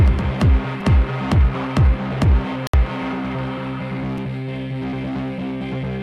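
At 0.81 s a repeated buffer produces a brief buzzy click: one piece of about 5.3 ms, which fits a 256-sample buffer, plays twice more with hard joins, costing about 10 ms of audio. At 4.18 s a single extra play gives a shorter click. Unlike a dropout, these glitches repeat sound instead of muting it.

From 2.67 to 2.74 s a digital broadcast dropout mutes the audio for 64 ms, which points to two failed frames, before the programme resumes further on. It is a true gap of silence, with no repeated or buzzing material, and the content sent during it is lost.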